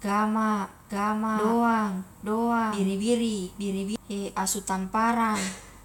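From 0.90 to 3.96 s there's a doubled audio track: a dry copy about a second behind at similar level, likely a slower capture path.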